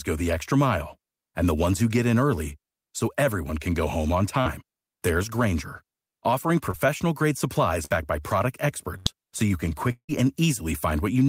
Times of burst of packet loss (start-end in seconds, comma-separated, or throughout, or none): 8.98-9.07